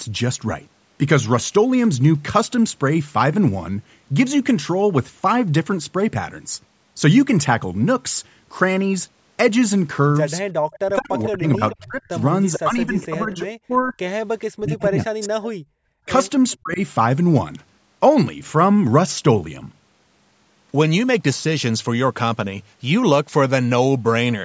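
Echo leak at 10.71 to 11.76 s: a faint copy of the speech returns about 435 ms late, roughly 15 dB below the talker, likely because a loudspeaker on the far end fed the microphone and its echo canceller let the residue through. Shorter, quieter scraps at the same 435 ms delay come back at 14.41 to 14.82 s (about 25 dB down), 15.42 to 15.47 s (about 20 dB down) and 16.5 to 16.57 s (about 35 dB down).

Speech suppressed in double talk at 10.8 to 13.94 s: while that echo overlaps the talker, the speech dips and breaks in pieces, deepest by roughly 40 dB and for about two seconds in total. The likely cause is the canceller failing to tell the talker from the echo and turning both down. The same chopping returns at 14.52 to 15.34 s (roughly 40 dB, about 0.7 s affected) and 16.06 to 16.8 s (roughly 35 dB, about 0.2 s).

Background gated by the echo canceller at 15.62 to 15.78 s: the room sound drops out, by about 39 dB at its deepest, for around 150 ms. 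The canceller clamped the microphone hard while the loudspeaker played, then released it. Throughout, the call's microphone processing leaves nothing above 8 kHz.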